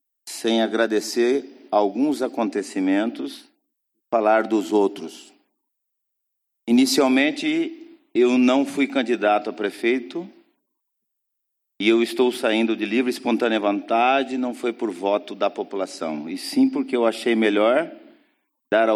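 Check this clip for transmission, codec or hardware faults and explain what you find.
Nothing stood out on listening that would point to a problem in how this audio was transmitted, encoded or captured.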